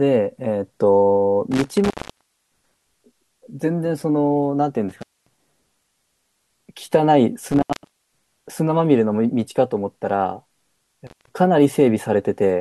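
Speech with an intermittent contact fault. A loose plug or cable connection briefly breaks the signal path. The sound drops out with crackle at the edges, and faint hiss remains while the line is open. This happens four times: 1.51 to 2.90 s, open for about 0.62 s; 4.89 to 5.41 s, open for 0.23 s; 7.47 to 8.27 s, open for 0.51 s; and 11.07 to 11.30 s, open for 0.18 s.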